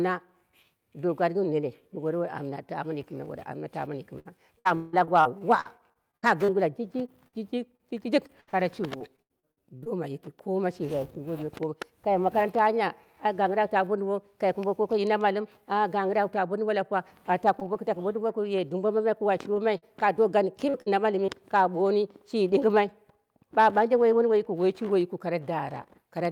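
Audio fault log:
4.19–9.88 s, repeated packet loss (robotic sound): Audio packets kept failing to arrive in time, leaving 24 gaps totalling 1040 ms, the longest 177 ms. The receiver patched 1005 ms by extending the preceding sound, so about 18% of this stretch is synthetic fill. The result is choppy speech with pieces missing, ending just before "yiki koma".
17.60–17.63 s and 17.73–17.77 s, short concealed packet loss: Right after "ta bo dumbo lapuwa", two separate 20 ms holes opened in the stream. Each was filled with 13 ms of continued sound and then blended back into the real signal. Both sound like a brief smear or wobble, and a short consonant could drop out.
19.54–21.30 s, repeated packet loss (robotic sound): A second run of 5 gaps totals 160 ms, the longest 45 ms. 159 ms were concealed, about 9% of the span, giving a lighter stutter with pieces missing.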